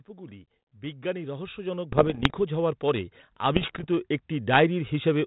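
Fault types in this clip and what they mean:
Automatic gain rising: the gain control decided the input was too quiet and slowly turned it up, so speech and background swell together by about 16 dB.
Bit errors on an ADPCM link: flipped bits knock the decoder's prediction off, giving rough, poppy bursts with brief level jumps, around 1.9 to 2.3 s and 3.5 to 3.8 s.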